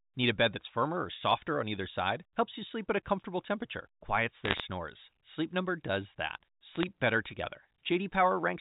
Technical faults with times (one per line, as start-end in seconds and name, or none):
4.45-4.60 bit errors on a digital phone line
6.75-6.83 bit errors on a digital phone line